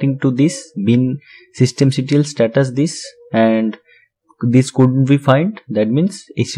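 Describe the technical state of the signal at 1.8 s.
Hard clipping runs from 1.63 to 1.83 s, so 1.8 s falls near the end of it. Over that stretch the signal is driven about 2 dB beyond what the stage can carry, and the peaks that exceed the limit are sliced off flat. Those squared-off tops generate harmonics high in the spectrum. With an overload this small, the result is a brief crackle riding on the loudest peaks rather than a continuous fuzz.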